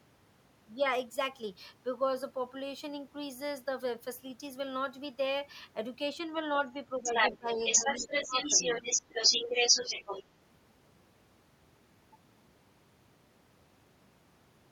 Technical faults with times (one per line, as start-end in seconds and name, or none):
6.99-7.88 speech suppressed in double talk
7.05-10.23 other side's voice leaking through
8.27-8.59 speech suppressed in double talk